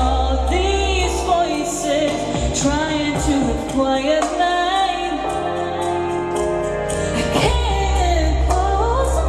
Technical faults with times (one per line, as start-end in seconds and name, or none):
none